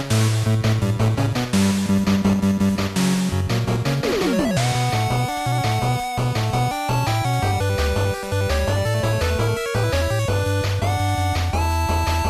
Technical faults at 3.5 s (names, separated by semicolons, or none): MP2 compression